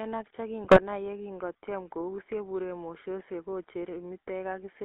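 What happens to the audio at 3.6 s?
GSM full-rate codec damage runs through the whole clip, including here: pulse-driven vocal-tract coding gives the speech a buzzy, gravelly roughness, squeezed into roughly 300 Hz to 3.6 kHz.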